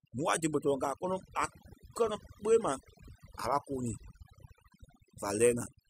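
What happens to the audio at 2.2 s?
At 2.2 s the speech is affected by overdone noise removal, which runs through the whole clip rather than starting there. A noise reduction stage was pushed too hard. It drives individual frequency bands down or out whenever they sit near its noise estimate. The quieter parts of the speech get removed along with the noise. The background drops and breaks up, dotted with twinkling specks.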